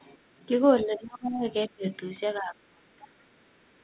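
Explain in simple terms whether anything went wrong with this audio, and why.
The talker's speech dips hard between 0.83 and 1.46 s, 1.68 and 1.85 s, and 2.39 and 3.13 s. That's most likely speech suppressed in double talk, where the echo canceller turned down this talker along with the loudspeaker echo while both sides talked at once.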